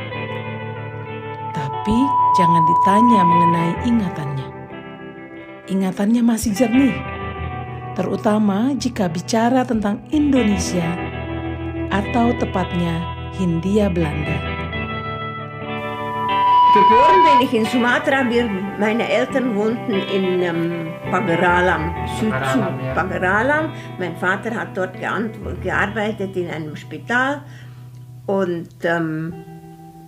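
Loudspeaker feedback squeal appears from 1.65 to 3.97 s and again from 15.66 to 17.47 s. A 986 Hz tone swells over about half a second, then about a second, reaching roughly 5 and 10 dB above the sound, as the microphone re-amplifies its own loudspeaker output.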